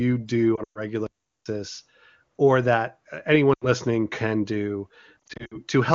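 From 0.56 to 0.80 s, lost AMR speech frames break up the speech. The losses are scattered over about 200 ms, and the longest gap is 120 ms. The decoder reuses the last good sound with falling gain, so the voice drops to near silence within two frames.

From 1.07 to 1.46 s the sound simply stops for about 390 ms, then resumes. This is a playback stall, likely from the player running short of data. Unlike a frame loss, it is plain silence with no drawn-out, fading tail.

Between "or that uh" and "can do", from 3.53 to 3.67 s, a shorter loss of 80 ms drops the voice to near silence.

After "can do", from 5.27 to 5.58 s, losses scattered over 320 ms, none longer than 60 ms, produce a series of brief dips and dropouts instead of a single fade.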